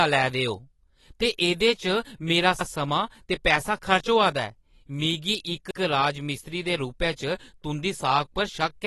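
From the start the speech has likely passed through lossy AAC compression at a low bitrate, probably around 32 kbps. The encoder discarded everything above 12 kHz and starved the remaining bands, so the plainly audible AAC compression leaves the voice dull and smeared, with fizzy, warbling sibilants.

At 2.61 s and again at 5.71 s, the audio was handled in overlapping chunks, with each chunk beginning 100 ms before the previous one ended. That overlap plays twice at every join, heard as a brief stutter recurring at 3-second intervals.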